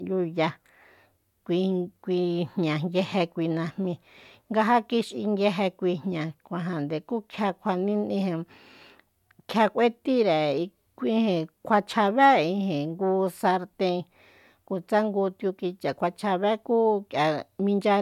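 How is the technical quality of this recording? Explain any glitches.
No technical faults or glitches are audible anywhere in the recording.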